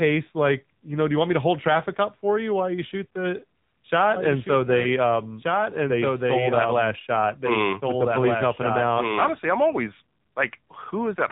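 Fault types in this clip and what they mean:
AMR narrowband mobile codec: The whole clip went through the phone codec at 7.4 kbps, so nothing above about 3.8 kHz survives and the speech sounds clearly buzzy and synthetic.
Doubled audio track: From 4.16 to 9.32 s a second copy of the speech, about 5 dB quieter, trails about a second and a half behind, likely from a second, slower capture path.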